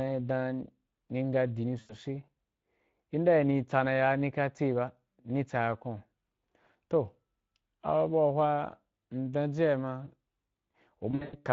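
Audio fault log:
Throughout: Speex codec. The speech has a grainy, hoarse edge. The encoder leaves the excitation only a few bits, so the voice is rebuilt from a coarse approximation of the original, and the damage sounds like a rate near 20 kbps.
1.79–1.96 s and 11.11–11.36 s: VoIP packet loss concealed by the speech codec. The first is a 100 ms gap. The second loses about 180 ms in bursts spread over 220 ms. Each time the decoder extends its last pitch and filter, so you hear a buzzy or noisy, fading smear, and the voice stays weak briefly after packets return.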